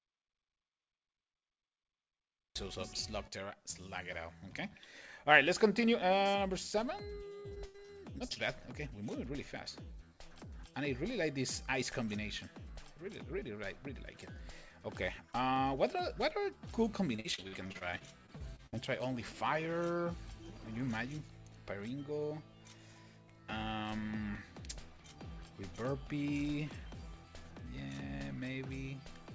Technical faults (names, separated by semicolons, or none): audio dropout to silence; repeated packet loss (robotic sound)